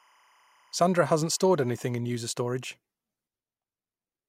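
Speech, with timecode bleed from 0.0 to 2.0 s, ending just before "user storage". A faint chirping warble alternates between pitches near 1 and 2 kHz and repeats at 25 frames per second, sitting about 35 dB below the speech. Linear timecode has leaked in from an adjacent track or cable.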